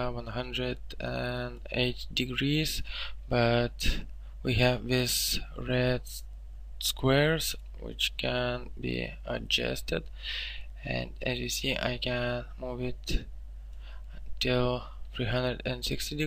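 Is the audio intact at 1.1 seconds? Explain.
Yes, the audio at 1.1 seconds is intact, with no dropout, click, distortion or other fault at that moment.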